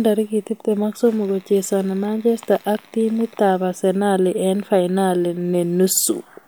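No technical faults can be heard anywhere in the recording.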